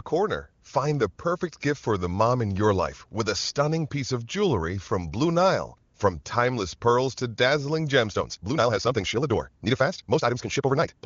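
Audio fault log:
8.06 to 11.05 s, time-stretched section: the speech suddenly runs at 1.95 times its pace, rushed, but its pitch stays unchanged. That points to software likely squeezing it by dropping short pieces, unlike a faster playback rate, which would raise pitch.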